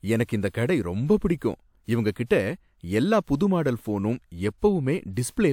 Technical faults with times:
0.49-0.54 pre-echo
1.37-1.41 pre-echo

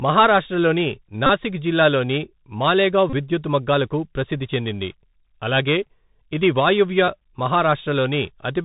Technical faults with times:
0.00-8.64 Bluetooth CVSD headset codec
1.26-1.30 Bluetooth headset packet repeated
3.10-3.14 Bluetooth headset packet repeated

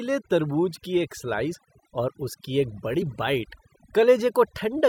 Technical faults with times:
0.00-4.89 overdone noise removal
1.53 compressed frames skipped
3.01 compressed frames skipped

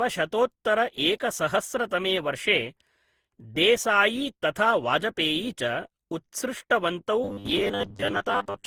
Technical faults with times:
0.00-8.66 generation loss
7.24-8.66 robotic sound from repeated short buffers

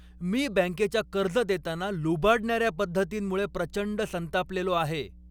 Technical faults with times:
0.00-5.31 mains hum

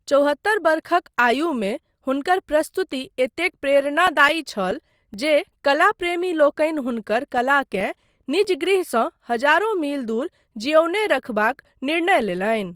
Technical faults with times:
3.86-5.14 CD scratch ticks
7.38-8.66 CD scratch ticks

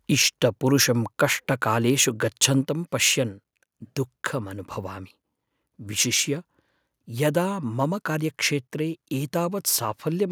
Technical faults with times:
2.43-2.45 microphone overload

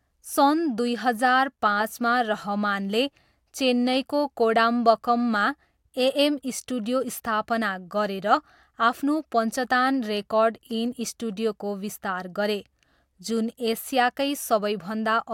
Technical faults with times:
none

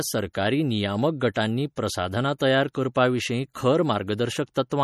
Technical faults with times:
0.00-4.84 MP3 compression
1.34 pre-echo
2.38 pre-echo

